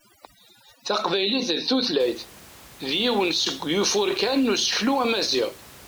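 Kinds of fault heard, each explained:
Overdone noise removal: For the first two seconds, a noise reduction stage works far too hard. It cuts individual frequency bands whenever their level sits close to the noise it has estimated. Quieter parts of the speech get caught and cut along with the noise. The background drops and breaks up into tinkly, sparkling specks. After 2.0 s the room noise returns at its natural level, about 23 dB below the speech.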